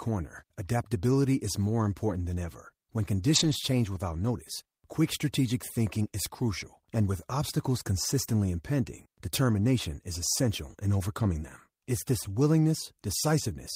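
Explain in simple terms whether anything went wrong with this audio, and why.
Two short stretches of this speech arrived missing and were filled in by lost packet rebuilt from error correction: 3.35–3.53 s, before "change without notice quick", and 9.51–9.53 s, between "obstacles consistently impending" and "is essential in overcoming". The next packet carried a rougher spare copy, so there's no silence, but those moments sound grainier.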